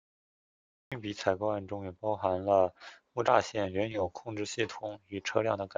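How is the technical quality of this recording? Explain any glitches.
The recording has one clear glitch, at the very beginning. From 0.0 to 0.92 s there is nothing but digital silence, and at 0.92 s the speech appears abruptly, already partway through a sound. This is a cut-off start: capture or streaming began late, so the opening of the utterance was never recorded and there is no natural onset or fade-in. On a waveform the trace is flat, then jumps straight to the speech signal at 0.92 s. A spectrogram shows an empty band ending in a hard vertical edge.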